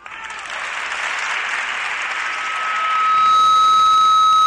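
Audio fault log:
1.90 s to end, loudspeaker feedback squeal: a microphone is picking up the loudspeaker it feeds, and at 1.3 kHz the gain around that loop exceeds one, so the tone reinforces itself on every pass. From 1.90 s a single 1.3 kHz tone rises out of the sound and swells over roughly a second and a half into a steady squeal, ending up roughly 10 dB louder than the rest of the audio and lasting until the clip ends.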